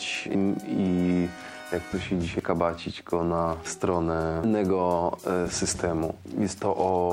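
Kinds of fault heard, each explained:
Damaged data in a compressed stream: corrupted bytes in the encoded audio make the decoder misread frames, lose sync and hunt for the next valid frame header, producing brief chirps or blips. Three short events occur at 0.35, 2.39 and 4.44 s, spaced about 2 s apart. On a spectrogram each shows as a narrow vertical smear of broadband or oddly tonal energy, while the waveform shows an abrupt discontinuity or burst breaking the surrounding signal.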